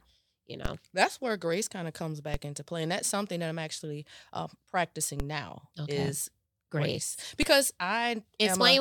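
DC steps occur at 0.65 s, before "that's where grace kind"; at 2.34 s, between "grace kind of comes" and "into play and that's"; at 5.20 s, before "now okay is grace"; and at 7.43 s. Each time, the waveform's zero line jumps by about -18 dBFS. It then decays, as a 20 Hz high-pass filter pulls it back. Each step is a low thump under unchanged speech.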